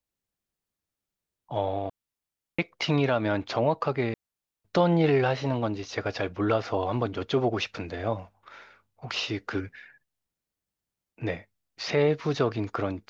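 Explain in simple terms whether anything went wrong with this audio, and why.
Two gaps break up this speech, both from a digital wireless dropout. Between 1.90 and 2.59 s, and again between 4.14 and 4.64 s, the sound drops to near silence for about 0.69 s and 0.5 s. The wireless link lost too much data, so the receiver muted itself with a very quick fade. That leaves clean holes with no crackle or noise burst on either side.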